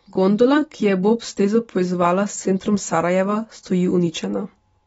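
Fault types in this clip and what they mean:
AAC compression: The speech sounds dull and smeared from start to finish, with nothing above 7.6 kHz and plainly audible coding damage. What separates it from a simple low-pass filter is the warbling, fizzy texture layered over the missing top end. That texture points to a transform codec quantising each frame against a hearing model with too few bits. The likely cause is AAC-LC at a low rate, which fits about 24 kbps.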